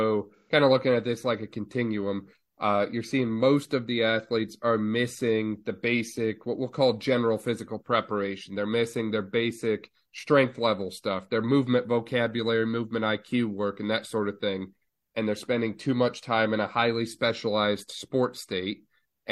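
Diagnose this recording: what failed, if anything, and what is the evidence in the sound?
The fault sits in the codec stage: AAC frame loss with concealment. Between 0.36 and 0.51 s the speech turns briefly smeared and noisy, with a phasey quality. The missing stretch of about 128 ms fits three lost frames. The decoder rebuilt that gap from the last good spectrum, with altered phase or interpolated energy. The loss was short, so the sound never fades to silence. It recovers as soon as valid frames resume.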